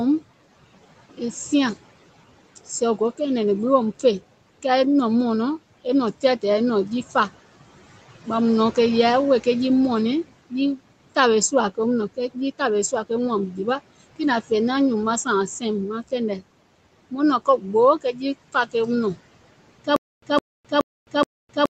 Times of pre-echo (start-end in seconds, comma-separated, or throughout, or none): none